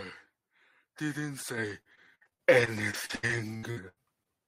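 From 1.69 to 4.27 s, repeated packet loss makes the speech choppy and robotic. Fifteen gaps, up to 78 ms each, are patched by stretching the last sound.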